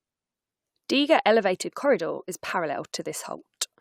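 Nothing stood out on listening to this speech recording.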